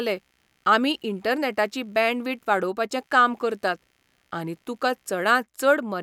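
From start to end, a faint computer activity noise sits under the speech. It is a low buzz pulsing around 70 times a second, some 45 dB below the speech. Processor or graphics load is disturbing the shared audio ground, so the buzz follows the machine's activity rather than the speech.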